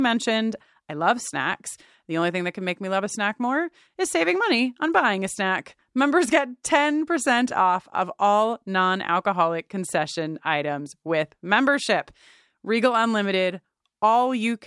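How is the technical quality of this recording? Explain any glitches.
Technical quality is sound, with no audible glitches or faults anywhere in the speech.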